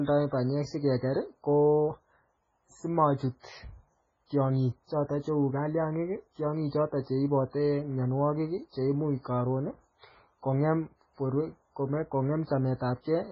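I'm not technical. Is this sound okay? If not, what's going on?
No. Throughout, the speech sounds watery and muffled, with nothing above 7.7 kHz. This is likely heavy MP3 compression squeezing the file too hard.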